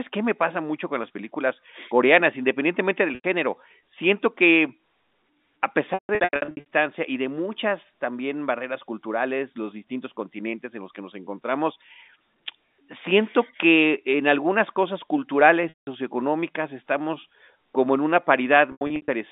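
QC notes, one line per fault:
3.15–3.24 s, 5.94–6.65 s, 15.69–15.87 s and 18.72–19.08 s, packet loss with pitch repetition: dropouts after "películas coreanas independientemente del", before "y de muchas también", and after "estamos como en una" get patched by repeating the last pitch cycle. The 90 ms gap sounds like a brief buzzy hold, and the longer, scattered stretches fade toward silence before the speech comes back.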